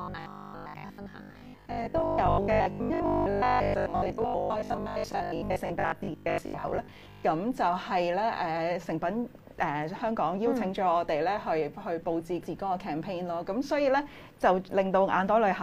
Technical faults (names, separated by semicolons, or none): robotic sound from repeated short buffers